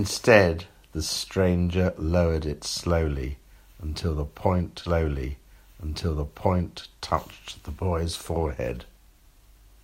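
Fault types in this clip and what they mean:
Stream segment repeated: the player queued the same chunk twice, so about two seconds of speech replay from 4.85 s, with a small blip at the jump back.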